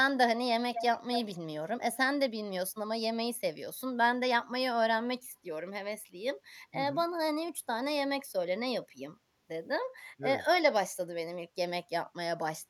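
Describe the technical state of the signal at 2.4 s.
At 2.4 s the speech drops out hard, roughly 40 dB down, from 2.27 to 2.49 s: speech suppressed in double talk, likely the echo canceller clamping both sides.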